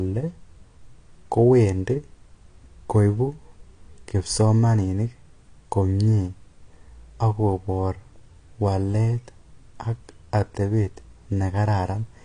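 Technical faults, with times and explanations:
Throughout, AAC compression: the speech has nothing above 9.8 kHz, and the codec damage is plainly audible as dull, smeared tone with fizzy, warbling sibilants. Unlike a clean low-pass filter, the remaining spectrum sounds patchy, likely from AAC-LC at a low bitrate near 32 kbps.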